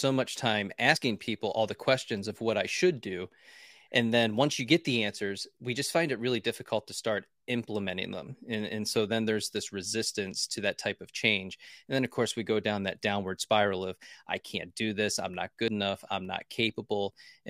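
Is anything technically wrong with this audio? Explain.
Yes. At 0.96 s, after "much time", and at 15.68 s, after "do this I'm not", a dropped buffer (overrun) is audible. The likely cause is that the capture side did not collect its samples in time, so roughly 40 ms and then about 70 ms vanished. Each splice jumps the speech ahead.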